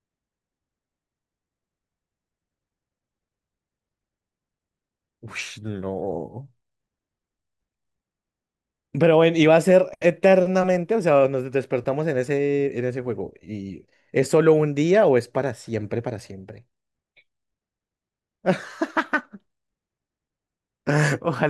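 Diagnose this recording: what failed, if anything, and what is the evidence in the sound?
No failure detected in this recording.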